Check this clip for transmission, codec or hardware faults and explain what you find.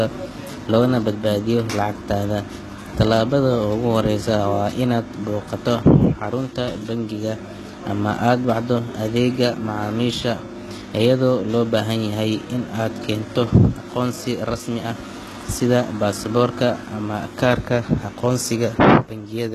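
One codec fault runs through the speech. HE-AAC compression, throughout: treble above 12.3 kHz is absent, and s sounds turn gritty and metallic, likely from band replication rebuilding copied treble at a very low bitrate near 16 kbps.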